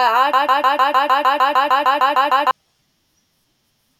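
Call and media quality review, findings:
Broken-record loop, 0.33–2.51 s. A 152 ms speech fragment repeats back to back, 14 times. Likely a stalled player or stream re-sending its last buffered fragment. The speech due in that span is lost. No recovery until 2.51 s.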